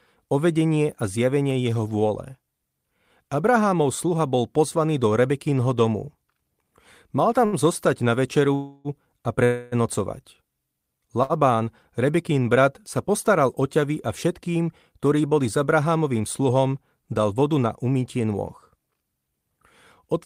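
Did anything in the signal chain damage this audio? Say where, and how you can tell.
Yes, on the network side. Short stalls from late packets at 7.45 and 11.23 s: the sound is held about 70 ms with a slight buzz or dip while the jitter buffer sits empty.

The call audio freezes at 8.55–8.88 s and 9.45–9.75 s, with a fading buzz or hiss for roughly 0.3 s each, likely from packets delayed in transit, before resuming where it stopped.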